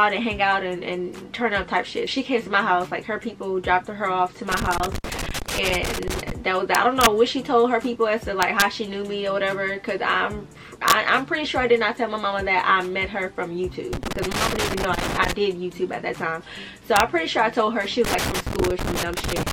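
A worn or dirty contact making and breaking in the signal path causes loose connector crackle from 4.52 to 6.31 s. The audio is chopped into an irregular burst of scratching. Then a summing or gain stage exceeds its largest integer and wraps to the opposite sign instead of limiting. This integer overflow turns loud peaks into violent cracks, sharper than clipping, at 6.75 to 7.06 s (driven about 2 dB over), 8.43 to 8.62 s (about 1 dB) and 10.88 to 10.92 s (about 3 dB). The connector crackles again from 13.93 to 15.33 s. Another overflow crack, barely over the limit, falls at 16.96 to 17.00 s. The final crackle runs from 18.04 s to the end.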